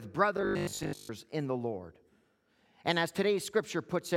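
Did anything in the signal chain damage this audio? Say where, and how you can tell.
Yes: robotic sound from repeated short buffers from 0.37 to 1.09 s, just before "in the", likely a buffer underrun. About 70% of that span is repeated, giving a 50 Hz buzz from a 20 ms loop, unlike steady mains hum.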